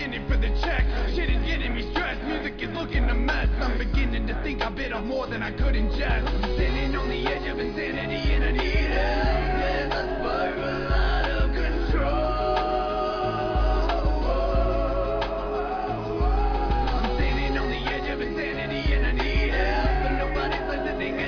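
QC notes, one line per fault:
No faults found in this audio. Nothing here calls for a QC note.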